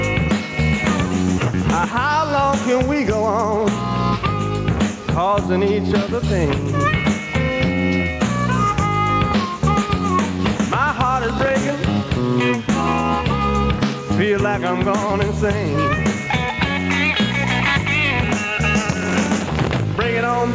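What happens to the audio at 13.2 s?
At 13.2 s the input gain is likely set far too high for the microphone, so a fast limiter or compressor keeps clamping down on each loud moment. This gain pumping runs through the whole clip, not just at 13.2 s. The level swings by about 10 dB. Loud and quiet parts sit squashed close together, and the audio arrives through the call codec with nothing above 8 kHz.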